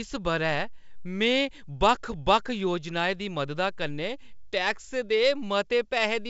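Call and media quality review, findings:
No faults found in the speech. G.722 wideband path at 64 kbit/s heard as a band limit near 7.7 kHz, with at most faint coding hiss above 4 kHz.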